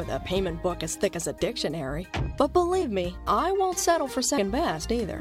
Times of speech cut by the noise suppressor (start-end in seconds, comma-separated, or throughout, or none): none